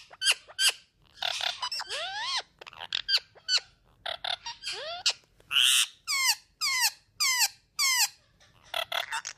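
No technical fault can be heard anywhere in the clip.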